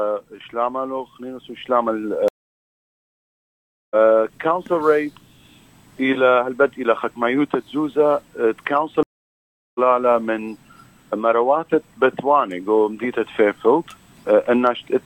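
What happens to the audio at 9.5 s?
A stream reconnect runs from 9.03 to 9.79 s, so 9.5 s falls inside it. The connection dropped, the player fell silent for about 0.72 s, then reconnected and started a fresh decoder partway through the stream. When sound returns it does not pick up where it stopped: it rejoins roughly 0.4 s further on, so a short stretch of the audio is simply missing and the flow jumps forward across the gap.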